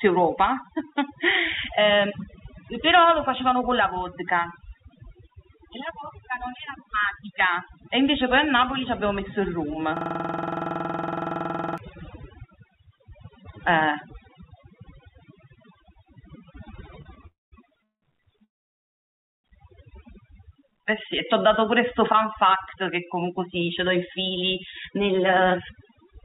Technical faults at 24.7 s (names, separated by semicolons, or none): overdone noise removal; jitter buffer speed-up